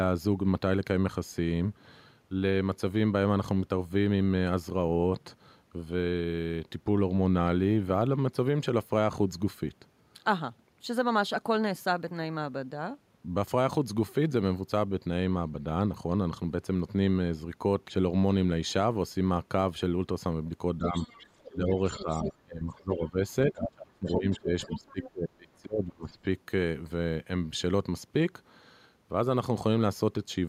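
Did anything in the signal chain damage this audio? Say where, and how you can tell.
Yes. Between 20.78 and 20.95 s the talker's level dips by about 5 dB. From 21.51 to 26.16 s it drops much harder, by about 25 dB at the deepest, with roughly three seconds of that span pulled down. This is likely speech suppressed in double talk, at the call-processing stage: the echo canceller couldn't separate the near talker from the far voice and attenuated both. Network packet loss would sound different, with clicks and gaps at random moments. Here the dips line up with another voice being present.

That second voice is the other side's voice leaking through, again likely a call-processing fault. The echo canceller left part of the loudspeaker signal in the microphone path. It sits about 15 dB below the talker from 20.87 to 22.31 s, as a faint scrap at 23.02–23.07 s, and about 20 dB below from 24.06 to 25.09 s. 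It is a distinct, weaker talker overlapping the main one. A room reflection or reverb tail would instead repeat the main talker's own sound.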